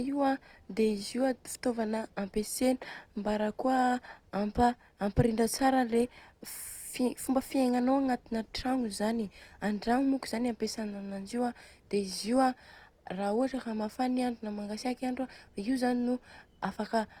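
Throughout, the speech sounds grainy and rough rather than swirly like MP3. Starved bands are noise-filled, likely from Opus compression at a rate near 24 kbps.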